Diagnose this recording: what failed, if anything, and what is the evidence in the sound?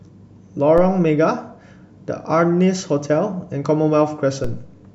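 DC step at 0.78 s and 4.44 s, each a low thump: the converter's zero line jumps about -17 dBFS, then decays through a 2 Hz high-pass.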